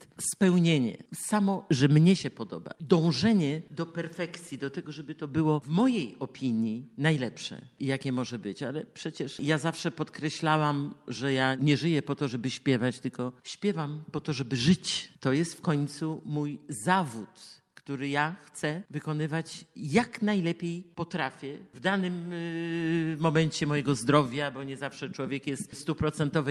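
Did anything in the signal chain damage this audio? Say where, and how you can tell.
No, there's no audible sign of damage anywhere in the signal chain.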